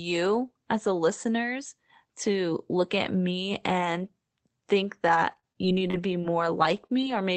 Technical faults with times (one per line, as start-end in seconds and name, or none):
5.07-7.12 scattered short gaps